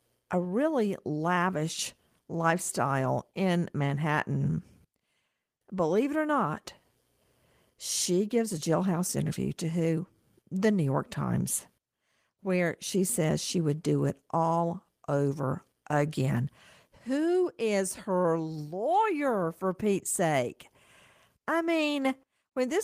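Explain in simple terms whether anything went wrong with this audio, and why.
Nothing went wrong with this speech recording. No technical problem can be heard at any point in it.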